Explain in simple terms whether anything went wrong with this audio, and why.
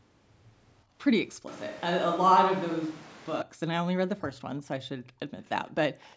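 A few things go wrong in this speech recording.

Background gated by the echo canceller: from 0.85 to 0.97 s, the quiet room sound behind the voice suddenly dips for about a tenth of a second and then comes back. The call's echo canceller briefly turned the microphone down while the loudspeaker was playing. It is a dip, not a change of tone, which sets it apart from a microphone switch. Only the background thins out, and nothing sounds farther away.

Switch to a distant microphone: from 1.47 to 3.42 s, the voice abruptly turns roomier and more hollow. It is somewhat quieter, with the room's hiss more noticeable behind it, and it snaps back just as suddenly at the end. The likely cause is that the close microphone dropped out and a farther one took over. Unlike the brief gating dip, this lasts nearly two seconds and changes the character of the voice itself.

Echo leak: faint, delayed copies of the voice slip through at 4.58 s, 5.43 s, and from 6.0 to 6.16 s. 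Each one trails the original by about 0.36 s. They are quiet scraps, faintest at 5.43 s and strongest at the very end. They likely come from a loudspeaker's sound reaching a microphone and being sent back. Room reverberation follows the voice immediately, but these arrive as a separate, later repeat.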